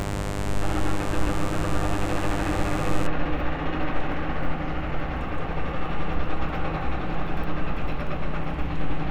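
A recording of everyday sounds with mains buzz from the start to 3.07 s: a raspy 50 Hz hum whose switching spikes, arriving twice per cycle, sit only around 10 dB below the sound. The spectrogram shows stacked horizontal harmonic lines reaching several kHz, and the waveform shows sharp spikes every 10 ms.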